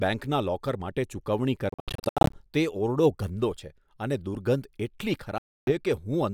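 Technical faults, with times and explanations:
1.69–2.41 s, Bluetooth dropout: the speech stutters through a burst of short, hard-edged silences, about 430 ms missing across roughly 640 ms, the longest single hole about 76 ms. Each resumes further along, likely from packets failing to reach the headphones in time.
5.38–5.72 s, Bluetooth dropout: a second cluster of abrupt gaps removes about 290 ms, and the speech picks up later as though it had kept playing, likely from late wireless packets being discarded.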